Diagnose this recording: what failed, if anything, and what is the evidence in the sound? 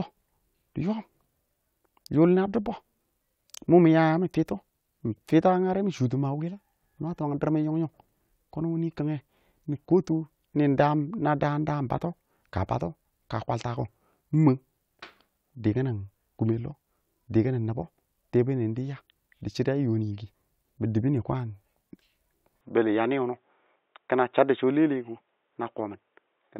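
From 22.61 s the sound turns dull, with nothing above 3.8 kHz and no gap. The likely cause is an input switched to a poorer, narrower-band capture device.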